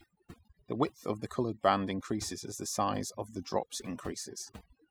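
Throughout the speech, the background sinks to near silence dotted with twinkling specks. That is overdone noise removal: the reduction pulled individual frequency bands down whenever they approached its noise estimate, taking the quieter parts of the voice too.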